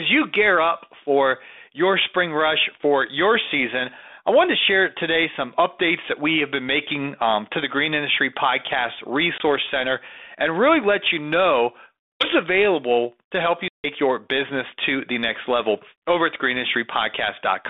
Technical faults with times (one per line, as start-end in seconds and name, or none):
9.38-9.41 packet loss on an ADPCM call
12.12-12.27 packet loss on an ADPCM call
13.68-13.85 packet loss on an ADPCM call